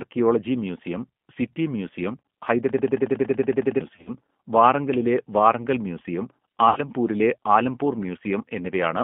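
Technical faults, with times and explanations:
Throughout, G.729 codec: speech rebuilt at 8 kbit/s from filter and pulse models, confined to roughly 150 Hz to 3.4 kHz, sounding plainly rough and synthetic.
2.69 to 3.81 s, system hang loop: a 93 ms piece repeats twelve times at 10.8 Hz, a machine-gun stutter, as the stalled system let the hardware recycle one buffer, which fits a 4096-sample buffer; about a second of audio never arrives.
3.94 to 4.11 s and 6.69 to 6.81 s, VoIP packet loss concealed by the speech codec: missing frames, 80 ms scattered over 120 ms then 70 ms, are extrapolated from the last pitch and filter into fading buzzy tone or coloured noise.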